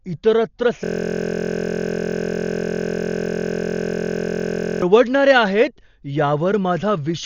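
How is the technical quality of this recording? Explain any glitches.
The technical quality is poor. There is one long glitch and one fault that runs through the whole clip.

From 0.84 to 4.82 s, a system hang loop takes over the speech. The audio system froze while the hardware kept replaying one 23.22 ms slice of its buffer. That slice, which fits a 1024-sample buffer, repeats at 43.1 Hz. It sounds like a steady buzz, not speech.

Throughout, the speech sounds dull and heavily damaged. Nothing is present above 7 kHz. Rough, fluttering noise sits around the tones. The likely cause is Dolby Digital compression at a very low bitrate. The encoder cut the top of the band and starved many frequency lines of bits. The decoder filled those lines with noise.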